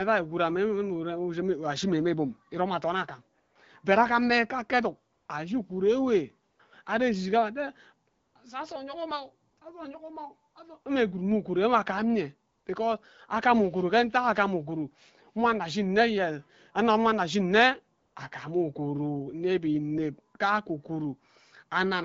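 From 3.39 to 18.15 s, ten pauses of 20 to 260 ms switch to AMR comfort noise as speech frames stop, showing as flat, featureless spectrogram patches of smooth hiss.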